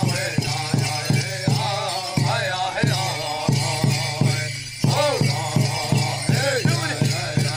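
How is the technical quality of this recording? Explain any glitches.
Nothing technically wrong is audible anywhere in the recording.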